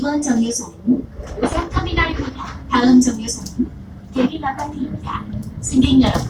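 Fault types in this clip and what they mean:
Clock slip clicks: Faint single-sample ticks recur steadily about every 0.3 s, some twenty between 0.16 and 6.15 s, likely from two unsynchronised clocks differing by roughly 70 ppm. Their even spacing separates them from buffer-underrun clicks, which arrive irregularly and leave audible gaps.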